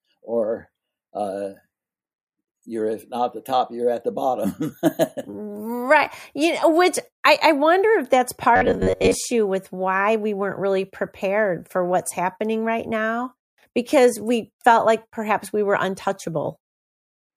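From 8.56 to 9.16 s, between "I wonder if that's" and "with why we weren't", the speech turns into a robotic sound from repeated short buffers: a rigid metallic buzz near 94 Hz. The likely cause is late audio, with a roughly 11 ms slice replayed over most of that stretch. Unlike a dropout, it never goes silent. It keeps a fixed pitch while loosely tracking the words.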